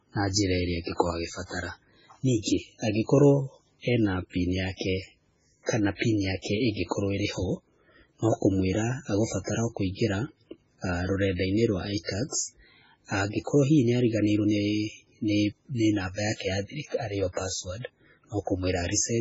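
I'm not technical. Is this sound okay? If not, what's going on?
No. The speech sounds dull and watery, with nothing above 7.7 kHz. Heavy MP3 compression is the likely cause, stripping detail to save space.

There is also pre-echo at 2.43 s, just before "angĩkorwo ena pini", and at 5.65 s. A short hiss of about 40 ms arrives before each sharp sound, softening it.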